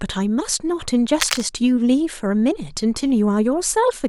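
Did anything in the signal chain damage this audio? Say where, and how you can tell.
Yes. Between 1.20 s and 1.42 s the speech is overlaid by cable scratch noise, a dense, irregular burst of crackle and rustle sitting only a few decibels below the speech. That roughness points to the analogue wiring stage, most likely a worn cable, connector or control being moved. Its contact resistance fluctuates rapidly as it shifts, modulating the signal with erratic noise for that quarter-second before the connection settles again.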